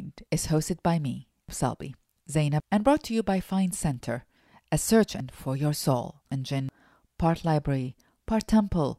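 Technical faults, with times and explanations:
1.49–2.60 s, chunks out of order: right after "is hosted by me", a 0.37 s chunk arrives two chunks late and plays after the two that should follow it. The sound jumbles briefly before "and brought to you", with three hard joins.
5.20–6.69 s, chunks out of order: after "a search", a 0.37 s chunk plays three chunks late, behind material meant to follow it. Nothing is missing, but the reordering garbles this stretch across three abrupt splices.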